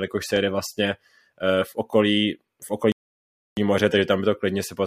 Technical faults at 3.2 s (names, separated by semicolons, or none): playback stall